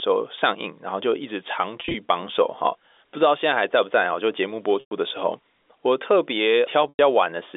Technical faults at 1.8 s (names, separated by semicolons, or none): packet loss with pitch repetition